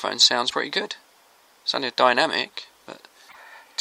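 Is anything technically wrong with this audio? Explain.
Yes. At 0.49 to 0.54 s and again at 3.28 to 3.36 s the audio jumps ahead and the next moment comes out garbled, likely a broken MP3 bit reservoir. After a gap, the following frames reach back for borrowed data that is missing, so they decode wrong until fresh data arrives. The lengths fit a few frames of about 26.1 ms. Each event may be a chirp, a noise burst or a brief dropout, so a spectrogram would show a short streak, a broadband smear or a gap, with a jump in the waveform at the cut.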